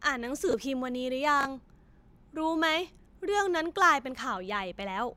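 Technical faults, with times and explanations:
0.49–0.53 s and 1.41–1.45 s, chunks out of order: a 21 ms chunk plays one chunk late, heard as a brief jumbled stutter.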